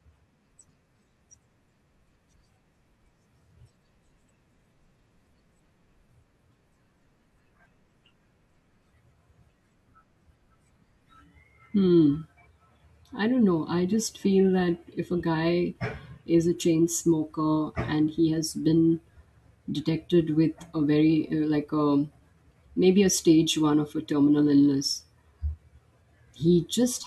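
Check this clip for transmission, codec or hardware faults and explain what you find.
There is one fault: overlap between stream segments, heard four times in this speech clip. Tiny skips land at 1.34, 2.33, 4.28 and 5.27 s. They follow the one-second segment boundaries. At each join, two segments claimed the same stretch of time. The player trimmed that overlap, though the audio was never doubled. About 5 to 6 ms of speech is lost each time. The waveform jumps across the gap. Each jump gives a tiny click or skip.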